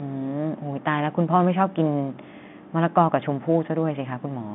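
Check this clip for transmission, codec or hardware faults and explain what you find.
Nothing to flag here, just speech carried over ordinary G.711 telephone coding, with the usual narrow line band of about 150 Hz to 3.6 kHz that gives it that familiar phone-call sound.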